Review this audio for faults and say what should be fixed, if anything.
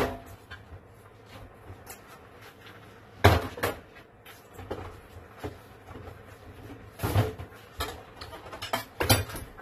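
Throughout, everything above 14.3 kHz is gone and there's a smeared, fizzy texture. That's likely AAC compression squeezing bits by discarding highs, which fits AAC-LC around 32 kbps. Re-export from the original source losslessly or at a much higher bitrate.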